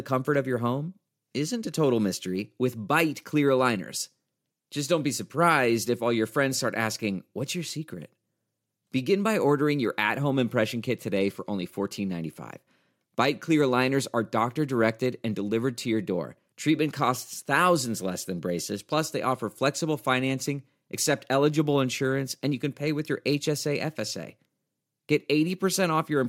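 No audible faults in this speech.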